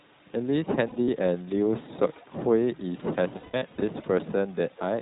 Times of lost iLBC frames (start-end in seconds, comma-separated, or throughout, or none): 0.88-1.08, 3.38-3.83